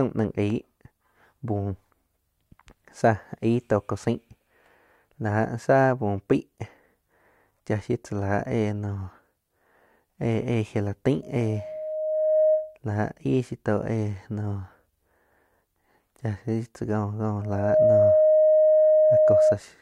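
Loudspeaker feedback squeal at 11.22–12.78 s, before "la aig", and at 17.41–19.59 s, after "shiu tzá": a steady 621 Hz tone swells from nothing over about a second, then under half a second, to about 5 and 10 dB above the speech. The microphone is re-amplifying its own loudspeaker. The fixed pitch and self-growing rise set it apart from a recorded test tone or hum.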